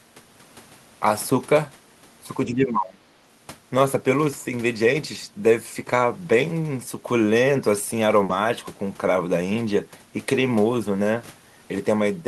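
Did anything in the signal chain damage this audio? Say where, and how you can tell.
Yes. Between 2.47 and 3.02 s, in the call-processing stage, the speech dips by roughly 20 dB for about half a second in total. This is speech suppressed in double talk, likely from the echo canceller mistaking the near talker for loudspeaker echo and attenuating it.

A burst of packet loss on the network leg hits at 8.23 to 8.32 s. The jitter buffer extends the last sound for about 60 ms, fading it, then playback resumes with roughly 60 ms of audio missing, audible as a smeared stall followed by a jump.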